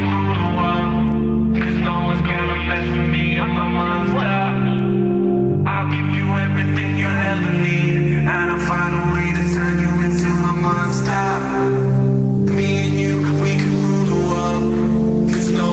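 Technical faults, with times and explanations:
Throughout, gain pumping: the gain swings around 10 dB, so everything ends up squashed together. Likely a fast limiter fighting input gain set far too high, heard through a call path topping out near 8 kHz.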